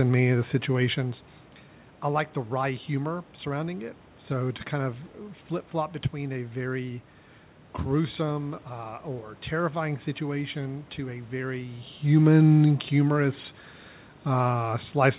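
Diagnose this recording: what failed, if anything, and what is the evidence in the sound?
Nothing stood out as a failure on listening; the room noise, the level shifts near 1 s and 11.5 s as the talker moves, and the top end stopping at about 4 kHz from the G.711 call path are all expected parts of the recording and its route.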